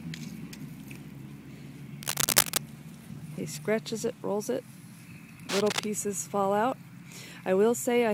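Cable scratch noise appears from 2.03 to 2.59 s and again from 5.49 to 5.84 s. Dense, uneven scratching rises slightly above the sound, then roughly matches it. A worn, moving connector is the likely cause.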